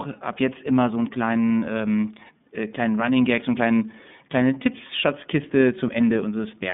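The speech runs through the iLBC codec from start to finish, coding each 30 ms frame's excitation independently at a rate that fits 13.33 kbps. The line band is cut to 150 Hz–3.6 kHz, with nothing above 3.7 kHz, so it sounds muffled and a little rough and synthetic, with plainly audible codec damage.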